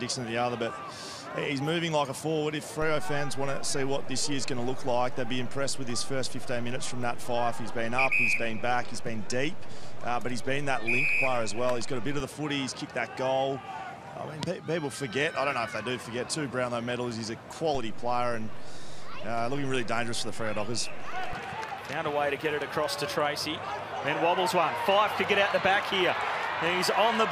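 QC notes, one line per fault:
2.82–12.20 s and 17.75–21.33 s, DC step: the waveform's zero line jumps by about -28 dBFS, then about -30 dBFS, holds, and steps back. Each jump and each return is a sudden level shift that the speaker cone turns into a low thump or click.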